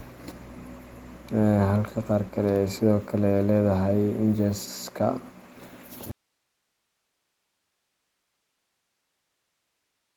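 A speech recording that suffers an audio dropout to a faint residue at 6.11 s, lasting to the end: the voice vanishes abruptly, leaving only hiss about 55 dB down, likely a lost signal feed with the downstream path still live. The waveform collapses to a flat, fuzzy line, and the spectrogram shows an empty, faint noise floor.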